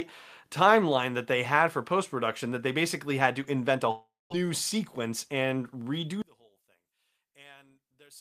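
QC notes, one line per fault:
3.91–4.47 s, long network dropout: right after "had to invent a" the sound smears into a fading buzzy tail for roughly 0.4 s, then drops to about 0.2 s of near silence before picking up again at "sequence and redo". About 0.4 s of the real audio is simply gone, not delayed. That's the receiver stretching the last bit it had to cover a gap, which is likely a stretch where packets never arrived.
6.22–8.20 s, one channel inverted: from just after "sequence and redo" through the end, folding to mono makes the speech collapse, dropping by about 30 dB into a faint ghost. The two channels are nearly identical, but one has its polarity flipped, so summing them cancels almost everything they share, and only the small difference between them survives. That's likely one side with its polarity reversed.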